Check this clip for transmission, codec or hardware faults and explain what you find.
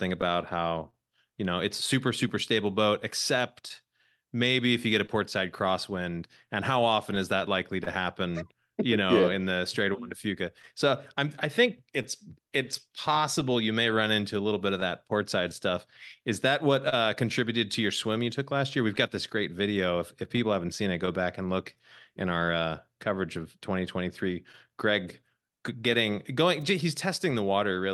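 The clip shows three related transmission faults: clock drift between the two ends, repeated timing corrections that follow from it, and scattered short gaps filled in by concealment. The Opus call path itself is working normally, and its top end stops near 12 kHz.

Clock drift between sender and receiver runs throughout. The sender's clock is about 1.5% slow, so the receiver's jitter buffer keeps draining. The result is small, irregular timing hiccups. On a spectrogram they appear as faint discontinuities with no fixed spacing.

Repeated timing corrections run from 4.36 to 27.26 s. To keep the buffer from running dry, the receiver repeatedly duplicates short pieces of sound, adding roughly 70 ms in total. This is heard as a slightly unsteady tempo. The waveform shows brief repeated cycles at uneven intervals.

Scattered short gaps occur in four stretches. From 0.21 to 7.88 s there are about ten, the longest around 30 ms. 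From 9.93 to 16.94 s there are about ten more of similar size. From 18.96 to 22.49 s there are about five, each around 15 ms or shorter, and from 24.52 to 27.34 s about five more of the same size. Each lost or late packet was patched by extending the preceding sound, which produces brief ticks or smears. A spectrogram shows these as short, smoothed-over harmonic stretches.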